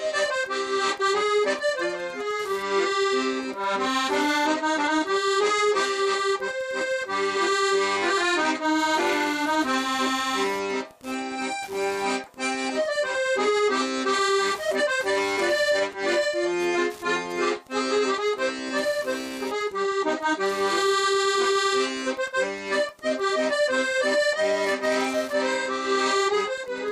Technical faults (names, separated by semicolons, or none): Wi-Fi interference